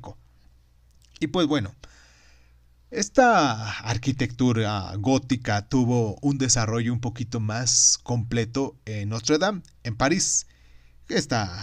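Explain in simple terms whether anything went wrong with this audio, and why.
Nothing went wrong with this audio, because no faults can be heard anywhere in the recording.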